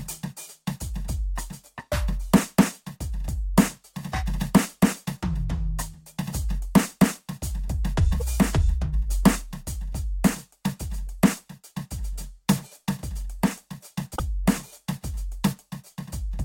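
At 8.20 to 8.22 s the music briefly breaks up. This is damaged data in a compressed stream. Some bytes in the encoded file are wrong, so the decoder misreads those frames. It loses sync and hunts for the next valid frame header. The same fault returns at 14.12 to 14.20 s. This second burst lasts longer, at about 80 ms.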